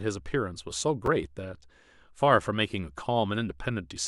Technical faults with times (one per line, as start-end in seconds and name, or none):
1.06 chunks out of order